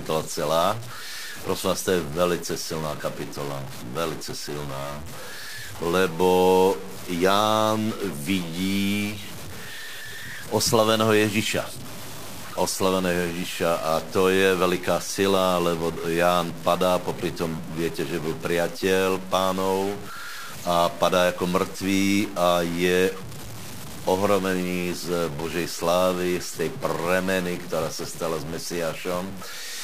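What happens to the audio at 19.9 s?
At 19.9 s the speech carries the same harsh, buzzy distortion heard throughout, likely from a stuck bit. One data bit fixed at a weight near -30 dBFS jolts about half the samples, and unlike clipping, the gritty noise persists through pauses too.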